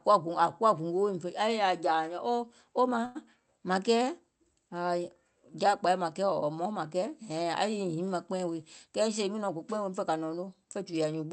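At 3.05 s a short stall from a late packet holds the speech for about 97 ms. The buffer ran dry. The last sound stretches, then resumes with nothing lost.

From 8.47 to 9.91 s, just before "fè kȧ", a jitter buffer speed-up runs the speech at 107%. Pitch stays level. Removing about a tenth of a second makes it sound hurried.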